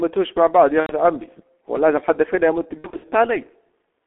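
Speech heard through heavy G.723.1 codec damage: muffled, hoarse and smeared, consistent with a 6.3 kbit/s low-rate coder, and a spectrogram shows nothing below 250 Hz or above 3.4 kHz. VoIP packet loss concealed by the speech codec appears from 0.80 to 0.93 s and again from 2.78 to 3.05 s, where about 150 ms of gaps are scattered across 240 ms with runs of up to 60 ms. In both spots the decoder stretches the last sound into a fading buzzy tone or coloured noise, seen as a sagging waveform envelope.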